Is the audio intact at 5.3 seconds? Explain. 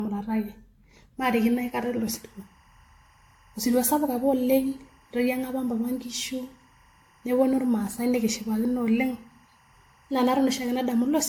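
No. At 5.3 seconds two faults overlap. Generation loss runs through the whole clip: the speech sounds swirly, hollow and smeared, with softened consonant attacks and nothing above 18.7 kHz. That's more damage than one pass of roughly 96 kbit/s AAC would do, so it's likely from about five decode-and-re-encode passes, each adding fresh quantisation noise on a shifted frame grid.

Timecode bleed also covers that moment, running from 1.31 s to the end. Linear timecode at 23.976 frames per second is leaking in from an adjacent track or cable. Its square wave flips between tones around 1 and 2 kHz, giving a faint chirpy warble roughly 35 dB below the speech.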